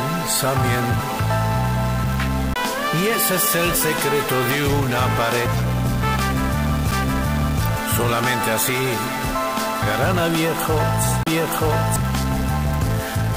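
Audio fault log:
1.0 s, 5.46 s, 9.82 s and 11.96 s: damaged data in a compressed stream. Each is a brief chirp, squawk, click or short hole. Corrupted bytes leave the decoder unable to read a frame, so it loses sync and skips ahead to the next valid frame header.
2.54 to 2.56 s, 6.91 s, and 11.23 to 11.27 s: CD skip. Each is a tick with a very short mute: about 20 ms, just a few milliseconds, and roughly 30 ms respectively. A jolt or flaw made the laser jump to a different turn of the disc's spiral, so playback silences briefly and resumes elsewhere in the audio. The clean dropout and the relocation distinguish it from the chirp of corrupted compressed data.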